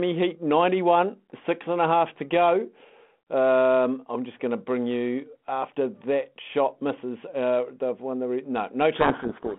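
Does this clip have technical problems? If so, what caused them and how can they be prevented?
Yes. From 8.96 s to the end of the clip, the speech is suddenly buried in harsh distortion. This is a codec payload misread: the two ends disagree on the bit order of the G.726 code words, so each 4-bit difference value is decoded wrongly and the adaptive predictor drifts far from the real signal. Low-bitrate G.726 hiss would be present throughout and track the speech level. This distortion starts abruptly, while the 32 kbit/s coding before it shows only light damage. To prevent it, both endpoints should negotiate and confirm the same G.726 packing order before sending audio.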